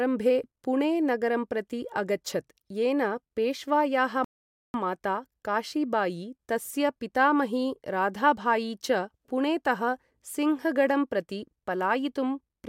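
A rebuffering stall interrupts this speech recording from 4.24 s to 4.74 s. The playback drops to silence for about half a second and then picks up at exactly the point where it broke off, so no speech is skipped, but the pause adds roughly 0.5 s to the running time. The player exhausted its downloaded audio and had to wait for more data to arrive before continuing.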